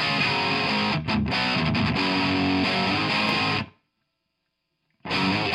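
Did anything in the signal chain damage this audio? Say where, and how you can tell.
Yes: a loud pop, two sharp pulses between 3.29 and 3.51 s, about 5 dB above the signal, likely a voltage transient in the analogue wiring, over continuing sound.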